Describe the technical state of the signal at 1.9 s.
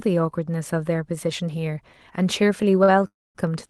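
At 1.9 s the speech is intact, with no fault present, only the band limit of about 12 kHz and the coding texture that come with its normal passage through the Opus call path.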